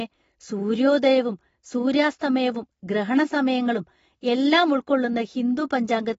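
Throughout the speech, nothing is present above 7.6 kHz, and sibilants and sustained vowels carry a warbling, fizzy smear. This is likely AAC compression at a low bitrate, roughly 24 kbps, where the encoder lowered its cut-off and quantised coarsely, leaving clearly audible damage.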